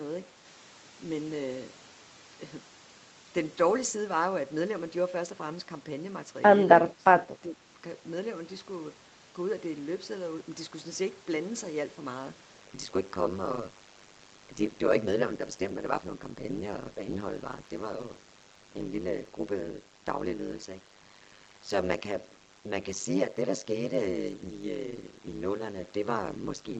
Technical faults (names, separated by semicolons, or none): speech suppressed in double talk; overlap-add ripple